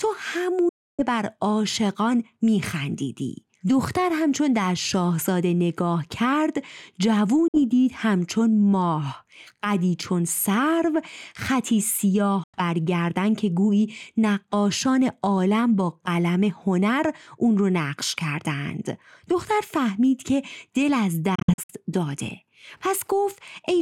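The speech cuts to abrupt silence at 0.69–1.02 s, 7.48–7.58 s and 12.43–12.58 s. Between 21.35 and 21.73 s it breaks into several short gaps, none longer than about 56 ms. Each time it resumes further along, as if it had kept playing. This is likely a Bluetooth dropout, where audio packets arrive at the headphones too late and are discarded.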